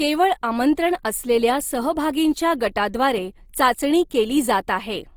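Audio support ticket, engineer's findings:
Opus compression, likely cause, audible across the whole speech clip. Encoder running in its music (CELT) mode at a rate that sounds like roughly 24 kbps, too few bits for clean band coding. Bands kept at full energy but filled with folded or noise content, so speech comes out grainy, rough and hissy, not swirly. Fullband retained, top near 20.4 kHz.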